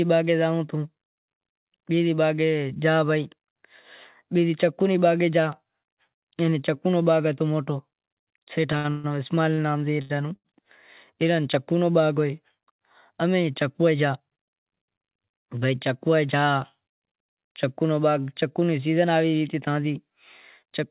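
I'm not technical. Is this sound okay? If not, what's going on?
No. Two things go wrong while the speech travels through a call connection.

From 8.72 to 10.47 s there are repeated stalls (stutter). The pieces of audio kept arriving late, so the receiver ran out of sound to play six times. Each time it stretched the last bit of sound to fill the pause, the longest for 136 ms, about 0.43 s in all. Nothing is lost, but the speech drags and stutters there.

From 13.80 to 15.49 s there is a jitter buffer speed-up. After the delays, the receiver held more audio than it wanted, so it caught up by cutting out many tiny slivers, roughly a seventh of a second in total. The speech plays at 110% speed at its normal pitch and sounds hurried.

The call line itself also keeps nothing above 4 kHz, which gives the familiar narrow telephone sound.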